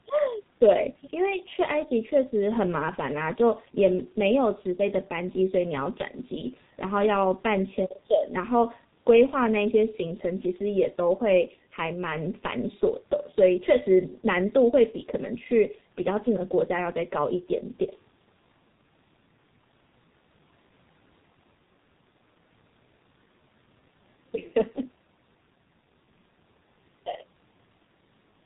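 Throughout the whole recording the speech sounds muffled and hoarse, with consonants that smear together instead of landing crisply. Nothing above 4 kHz survives, so sibilants lose their edge. This is the sound of the G.723.1 codec at a very low rate, which fits about 6.3 kbit/s. It works in 30 ms frames and refreshes its model of the voice slowly, so the damage here is heavy.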